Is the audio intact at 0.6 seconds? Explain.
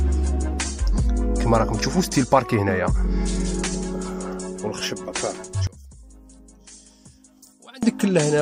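Yes, at 0.6 seconds the audio is intact, with no dropout, click, distortion or other fault to be heard at that point.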